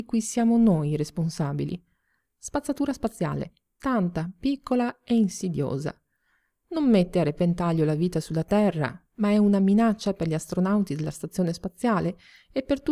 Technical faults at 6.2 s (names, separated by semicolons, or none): none